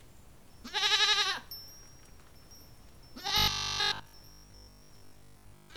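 Robotic sound from repeated short buffers takes over this recording of everyday sounds from 3.28 s to 5.76 s, near the end. The audio turns into a rigid, metallic buzz at 50 Hz, with the original sound only loosely traced underneath. The likely cause is new audio arriving too seldom, so playback keeps looping the last stretch, which fits a buffer of about 20 ms. That repetition fills most of the span while the real material is skipped.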